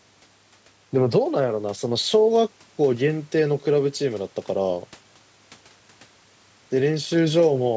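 Speech with no technical fault to report. It has passed through call microphone processing, which trims the lowest bass and leaves nothing above 8 kHz, as expected for that path.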